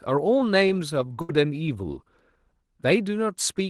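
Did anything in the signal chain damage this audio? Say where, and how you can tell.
Yes. At the network stage there is a burst of packet loss from 1.21 to 1.31 s. For about 72 ms the receiver keeps extending the last sound it got and fades it down, so the audio turns into a held, dwindling sound. It then jumps forward, with roughly 80 ms of the original never arriving. On a spectrogram, the energy in that span smears into flat, fading energy and then cuts back sharply into normal texture, all within the call path's 12 kHz band limit.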